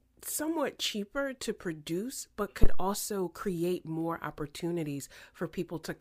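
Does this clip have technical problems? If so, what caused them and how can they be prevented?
Yes. A phantom power thump runs from 2.64 to 2.92 s. This deep thump peaks at about -8 dBFS and decays in 63 ms. Switching the supply on a live input sent a voltage step through the coupling capacitors. Mute the channel before switching phantom power.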